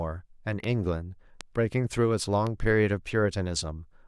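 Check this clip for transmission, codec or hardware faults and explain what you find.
There are three bit error spikes in this speech, at 0.64 s, 1.41 s and 2.47 s. Each is a flipped bit in two or three consecutive samples, jumping the value by a power of two, peaking at about -22 dBFS, -15 dBFS and -22 dBFS. Each sounds like a sharp tick unrelated to the speech, shows as a lone needle on the waveform, and appears as a thin full-height vertical line on a spectrogram.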